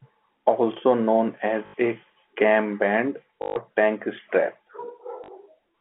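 At 1.66–1.74 s (just before "a cam band"), 3.42–3.56 s (between "a cam band" and "tank strap") and 5.24–5.28 s, packet loss with last packet repeated replays the same short fragment. The result is a robotic stutter that buzzes near 50 Hz, which fits 20 ms packets. On the waveform these gaps show as identical repeating blocks.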